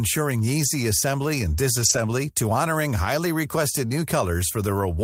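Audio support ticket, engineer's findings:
Lost packet rebuilt from error correction, 0.65–0.67 s (20 ms, fits one packet) and 1.81–1.99 s (100 ms, about five separate ones). No gap or repeat as in concealment, just a rougher, noisier low-bitrate Opus FEC copy.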